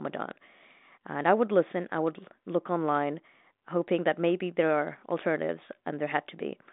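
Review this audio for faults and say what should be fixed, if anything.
Nothing in the speech stood out on listening, so there is nothing here that needs fixing.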